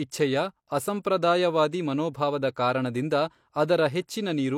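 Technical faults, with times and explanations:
1.03 s, pre-echo: there's a short hiss in the roughly 18 ms just before a sharp attack in the speech, and the attack itself lands soft and smeared. The codec spread its quantisation noise across the whole block, so noise meant for the loud onset leaked into the quiet gap ahead of it.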